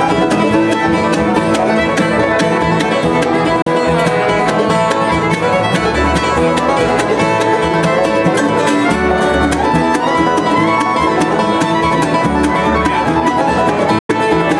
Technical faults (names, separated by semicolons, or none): Bluetooth dropout